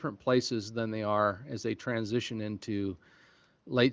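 Speech, band-limited by call microphone processing with nothing above 8 kHz and carried over the AMR wideband (HD Voice) codec at 23.05 kbit/s, shows no technical faults.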